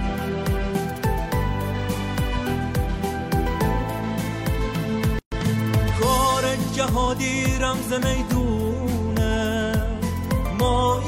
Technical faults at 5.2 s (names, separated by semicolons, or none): gap at a join of encoded pieces